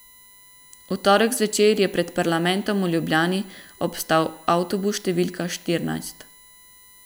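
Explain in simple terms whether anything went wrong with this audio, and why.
Throughout the speech runs a faint, steady whine at 1 kHz. This is USB whine: electrical noise from the computer's USB connection leaking into the recording.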